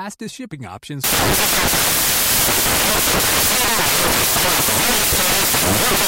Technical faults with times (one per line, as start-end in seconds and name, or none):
1.04-6.08 samples built from the wrong bytes